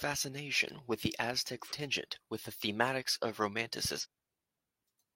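Damaged data in a compressed stream at 1.68–1.72 s and 4.00–4.06 s: corrupted frames throw the decoder out of sync, and each break is heard as a brief glitch in the speech.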